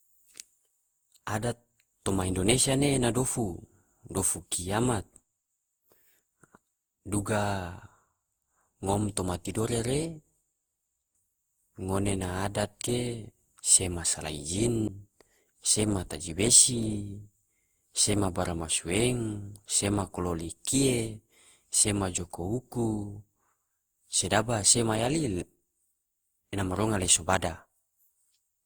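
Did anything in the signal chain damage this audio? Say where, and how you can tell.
Yes. Generation loss runs throughout, at the codec stage. The speech sounds swirly, hollow and smeared, with blurred attacks, likely from about ten Opus passes around 64 kbit/s compounding quantisation noise.

A CD skip occurs at 14.88 s, during disc playback. There is a roughly 10 ms mute, then the speech resumes from another turn of the spiral.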